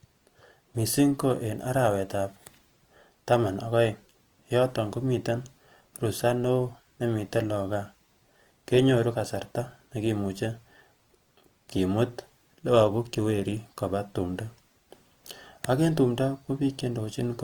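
Throughout, the speech sounds grainy and rough, likely from Opus compression in music mode at a low bitrate. On a spectrogram, the bands look noise-filled up to 20.2 kHz.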